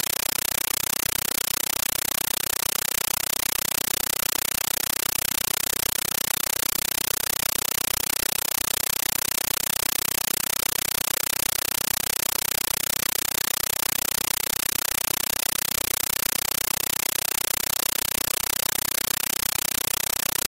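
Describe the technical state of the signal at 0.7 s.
At 0.7 s the signal is a compressed stream played as audio. This holds for the whole clip, not just that moment. An AC-3 bitstream reaches the output as if it were ordinary samples and is never decoded. Each frame arrives as a dense burst of noise about 9.33 ms long, then silence until the next frame. Bursts repeat 31.25 times a second in this 448 kbps Dolby Digital stream. The result is very loud, chattering static in place of the sound.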